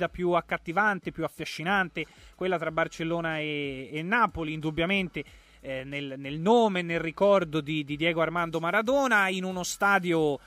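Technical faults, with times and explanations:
8.38–10.47 s, pre-emphasis left on: treble lifted by about 8 dB at 10 kHz with no matching de-emphasis, which fits the CD 50/15 µs curve, so the sound turns thin, bright and sibilant.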